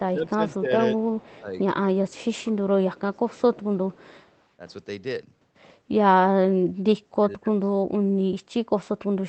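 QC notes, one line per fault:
0.06–7.91 s, speech suppressed in double talk: the voice dips at 0.06–0.72 s and 1.4–1.55 s (down by about 10 dB), at 2.41–3.78 s (about 20 dB), and most deeply at 6.44–7.91 s (about 30 dB). This likely happened because the far side was talking at the same time, and the echo canceller could not tell this talker from loudspeaker echo, so it turned both down.
1.0–4.42 s, echo leak: a faint delayed copy of the voice trails the talker by 162 ms at 1.0–1.4 s, 2.09–2.4 s, 3.14–3.41 s and 3.92–4.42 s. It sits about 30 dB below the speech, and about 35 dB below at 3.14 s. The likely cause is a loudspeaker on the other end whose echo canceller did not fully remove what its microphone picked up. The remainder was sent back as a quiet repeat.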